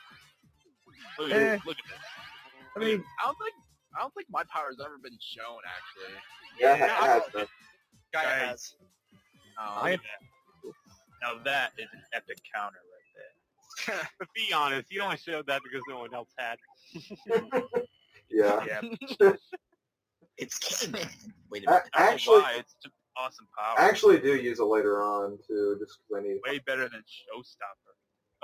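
A speech-tuned noise suppressor was left running on non-speech audio, so the level swings by around 5 dB throughout and held or fading sound pumps and thins while attacks pass through. The noise suppressor also cut sound it mistook for noise at 0 to 1.0 s, 2.5 to 3.9 s, 6.35 to 6.58 s, 7.5 to 14.2 s, 16.3 to 18.3 s, 19.4 to 20.3 s, 21.34 to 21.51 s and 27.0 s to the end, dropping it by up to about 21 dB and clipping decays short.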